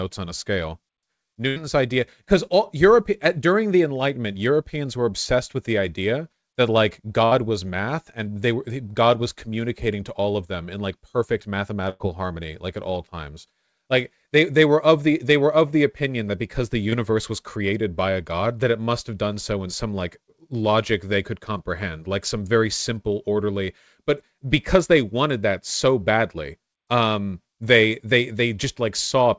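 Packets in this speech recording went missing on the way to the receiver, which is consistent with a call running over G.722 at 64 kbps, since nothing reaches above 8 kHz. Three bursts of packet loss occur, at 1.48–1.58 s, 7.26–7.33 s and 11.89–12.02 s. Each time, the receiver kept the last sound going while turning it down, which comes across as a held buzz or fading hiss. Speech then picks up further along, with roughly 80, 60 and 100 ms of audio simply gone. At 16.90–16.94 s, a short concealed packet loss occurs. About 20 ms never arrived in time, and the receiver patched the gap by extending the preceding sound before blending back into the real signal. The result is a brief smear or wobble.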